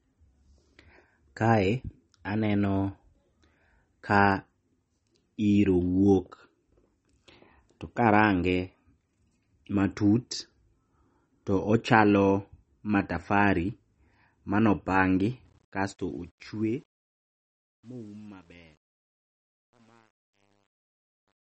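The clip is speech. Throughout, nothing is heard above 8.4 kHz, so the top of the sound is dull and closed in. Plainly audible codec damage rides on everything. The sound turns watery and swirly as weak frequency detail flickers in and out, and attacks smear. The cause is likely MP3 compression at a low bitrate, which fits something around 32 kbps. An encoder that short of bits discards quiet components and sets a fixed treble cut-off. From 15.45 s to the end, the sound fades out with truncation distortion on the fade. The volume stage keeps too few bits, which fits about 10-bit resolution, and it adds no dither. As the level drops toward the smallest step, the waveform collapses into coarse square steps. That makes the tail gritty. It is worst from 17.02 s to 21.41 s, where the fade is quietest.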